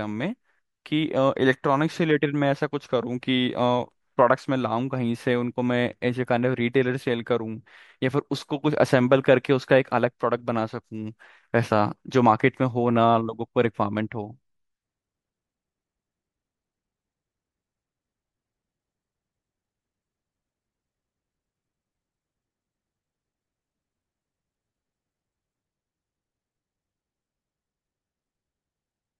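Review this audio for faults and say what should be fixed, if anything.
Nothing to fix here: no faults turn up anywhere in the speech, so it needs no repair or change to the signal chain.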